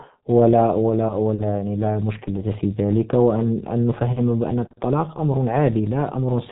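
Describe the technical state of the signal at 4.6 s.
G.723.1 codec damage is present at 4.6 s, as it is across the whole clip. The speech has been squeezed through a low-rate telephony coder whose heavy artefacts fit a bitrate around 6 kbit/s, working in coarse 30 ms frames with a slowly updated model of the voice. Nothing above 3.8 kHz survives, so the speech sounds muffled and hoarse, and consonants smear into one another rather than landing crisply.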